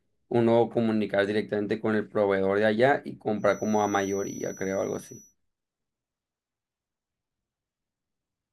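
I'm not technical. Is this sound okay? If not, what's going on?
No. A feedback whistle: the loudspeaker likely fed back into the microphone, adding a thin 5.9 kHz whistle at one pitch that swells and fades slowly, quietly under the speech from 3.33 to 5.36 seconds.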